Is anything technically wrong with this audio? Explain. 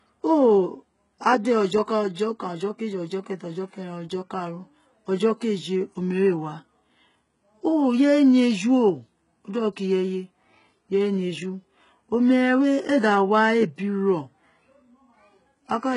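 Yes. Throughout the speech there is heavy codec damage consistent with HE-AAC compression, likely at a very low bitrate around 12 kbps. Treble is rebuilt by spectral band replication from lower bands, so harmonics misalign above the crossover, s sounds turn gritty or lispy, and nothing extends past 11.1 kHz.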